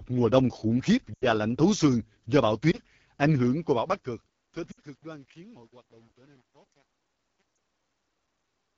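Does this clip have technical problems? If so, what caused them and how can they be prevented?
Yes. The AMR wideband (HD Voice) codec runs throughout at 8.85 kbit/s, one of its lowest rates, making the speech rough and raspy. Unlike packet-loss damage, this roughness is constant rather than in bursts. Prevent it by negotiating 12.65 kbit/s or higher.

Lost AMR speech frames occur at 1.14 to 1.25 s, between "mùa đông khủng khiếp" and "lạnh thấu xương do"; at 2.71 to 2.79 s, just after "thấu xương do bão"; at 4.71 to 4.79 s; and at 7.56 s. The decoder repeats its last settings with falling gain, so each gap sounds like a short warble or a quick drop to near silence rather than a click. The longest gap, about 80 ms, fits four lost frames. Better radio coverage or error protection would prevent this.

Truncation distortion on a fade starts at 3.51 s as the smooth fade-out from about 3.5 s to 8.78 s proceeds, and is worst from 4.28 s to the end. 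The quiet tail turns gritty, which points to roughly 9-bit undithered gain processing. Codec roughness, by contrast, would not worsen as the level falls. Keep the fade at higher resolution and add dither.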